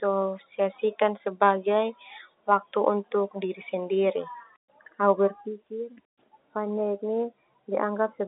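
No faults: the speech sits in a normal G.711 telephone channel, passing roughly 250 Hz to 3.7 kHz with nothing above 3.8 kHz, consistent with mu-law coding at 64 kbps.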